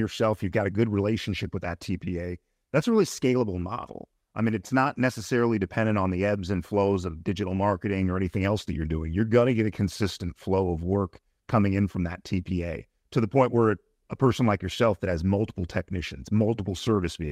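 No technical faults can be heard anywhere in the speech. There is no moment in the audio that calls for a timestamp or further comment.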